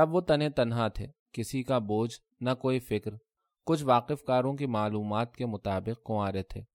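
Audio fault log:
No faults detected in recording.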